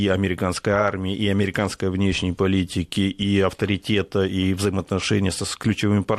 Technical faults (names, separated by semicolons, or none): loud pop